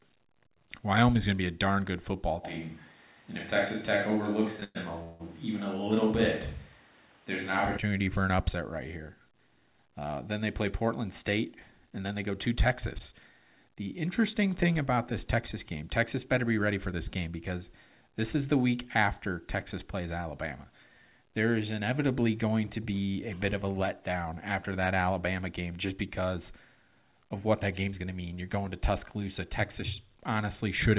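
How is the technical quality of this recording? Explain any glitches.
The recording has several glitches against a narrowband, telephone-like sound with nothing above 4 kHz, which points to a G.711 call codec.

Switch to a distant microphone, 2.45 to 7.76 s, from after "a darn good football" until "for an upset right": the likely cause is that the close microphone dropped out and a farther one took over. The sound turns roomy and thin with little level change, and room noise rises to roughly 30 dB below the speech.

Short stall from a late packet, at 4.60 s: a packet arrived about 19 ms late, so the receiver held the last sound until it came. Nothing is lost, but that instant is briefly drawn out.

Call audio freeze, 4.64 to 4.77 s and 5.03 to 5.22 s: held-up packets likely emptied the jitter buffer. The receiver stretched the last sound for 109 ms, ending in 20 ms of silence, and then for 168 ms, inserting audible gaps.

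Jitter buffer speed-up, 11.39 to 12.31 s at 107% and 16.67 to 17.31 s at 108%, the second between "better be" and "because this is the": to shed excess delay, the receiver cut out around 70 ms in small pitch-period slices each time. The pitch stays the same, but the delivery sounds briefly hurried.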